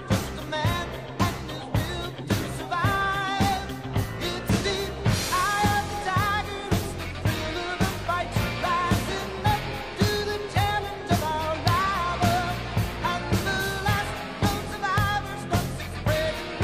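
The audio carries three electrical switching spikes, sharp snaps at 4.48, 11.68 and 14.98 s, each peaking around -10 dBFS, most likely arcs from a nearby switch or motor picked up by the line. Unlike dropouts, the sound continues underneath each snap.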